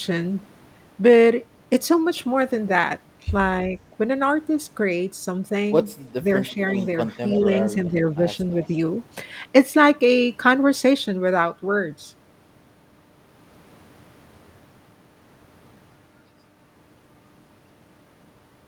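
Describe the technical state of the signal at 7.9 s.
From 7.9 to 7.98 s the speech briefly dips by roughly 10 dB, consistent with speech suppressed in double talk, likely an echo canceller ducking both overlapping talkers.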